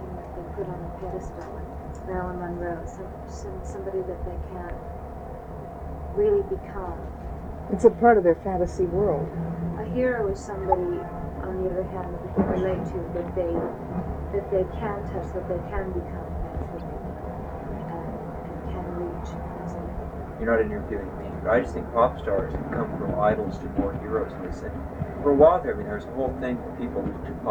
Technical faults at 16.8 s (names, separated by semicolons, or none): corrupt frame decoded